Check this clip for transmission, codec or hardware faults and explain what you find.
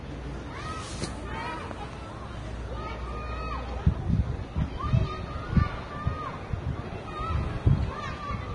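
There's one fault, and it runs through the whole clip: what sounds like heavy Vorbis compression. Nothing comes through above about 10.6 kHz, and the treble that's left has a hissy, grainy texture, with tones sounding roughened and attacks smeared. That's likely a low-quality Vorbis encode. The codec chops off the top end and quantises the remaining high-band detail so coarsely that it turns into noise of similar energy. The damage level points to a bitrate somewhere near 29 kbps.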